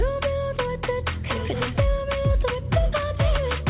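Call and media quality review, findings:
No call or media quality findings; the audio carries nothing above 4 kHz, consistent with a narrowband G.711 mu-law call path at 64 kbps.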